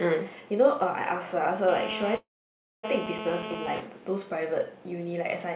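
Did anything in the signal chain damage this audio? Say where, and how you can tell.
Yes. From 1.68 to 3.80 s a hard, raspy buzz sits on top of the speech at about 6 dB below it, pitched at 217 Hz with a dense stack of harmonics and steady throughout. This is GSM phone buzz entering at the analogue wiring stage: a nearby 2G handset on a call transmits radio bursts 217 times a second, and a junction in the audio circuitry rectifies those pulses into an audible tone unrelated to the signal.

From 2.16 to 2.85 s there is a call audio freeze. The last sound is stretched into a fading tail before about 580 ms of silence, and then the speech resumes exactly where it stopped, with nothing skipped but everything after arriving 674 ms late. The cause is likely the network: packets were held up and the jitter buffer ran dry, so the receiver padded the gap in the G.711 stream, which carries nothing above 4 kHz.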